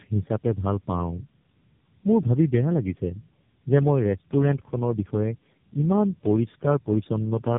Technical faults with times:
0.00-7.59 tandem speech coding

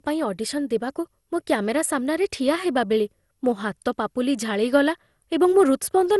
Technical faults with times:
0.00-6.20 generation loss

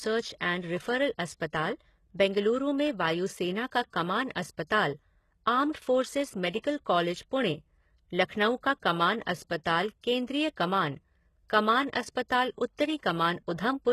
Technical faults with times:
0.00-13.93 HE-AAC compression
6.50-6.54 pre-echo

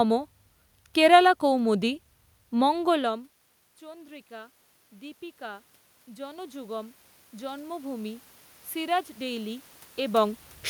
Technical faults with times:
2.77-10.46 automatic gain rising

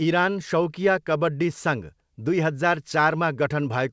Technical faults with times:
none

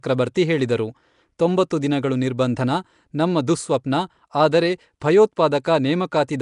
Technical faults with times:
0.00-6.42 Nellymoser compression

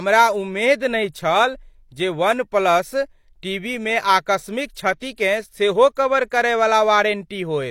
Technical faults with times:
4.99-5.18 pre-echo
5.95 pre-echo
6.30 pre-echo

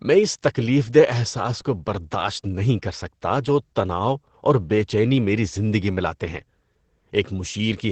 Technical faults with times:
0.00-7.91 Opus voice compression

